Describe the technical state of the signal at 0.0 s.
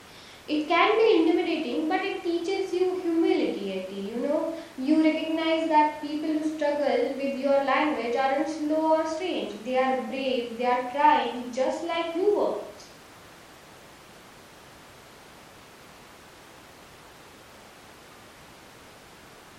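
At 0.0 s the signal is intact, with no audible fault at that moment.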